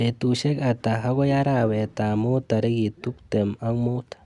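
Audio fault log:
No faults are heard in this speech recording. Nothing in the sound calls for a time or a value on this log.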